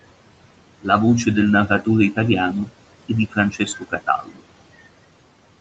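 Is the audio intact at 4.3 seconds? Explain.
No. From 4.23 to 4.41 s the speech sounds swallowed: a stretch of roughly 150 ms goes faint, sinking by as much as about 11 dB before recovering, so the sound there seems to duck away into the background. This is speech cut by the noise suppressor. The suppressor mistook that part of the speech for noise and turned it down along with the room noise it was meant to remove.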